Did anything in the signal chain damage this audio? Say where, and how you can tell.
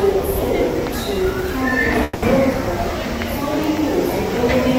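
Yes: a call audio freeze at 2.03 to 2.24 s, at the network and jitter-buffer stage. The last sound smears into a fading buzz for about 190 ms, then resumes exactly where it stopped, with nothing lost and everything after shifted 190 ms later. Delayed packets likely starved the buffer.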